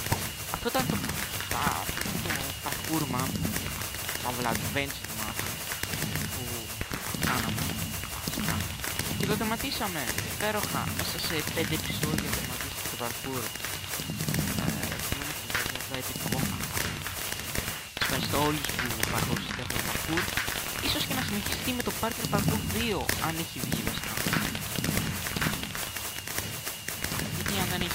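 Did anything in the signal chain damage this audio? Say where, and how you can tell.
No, nothing along the chain has left a mark I can hear, so there's no stage to point to here.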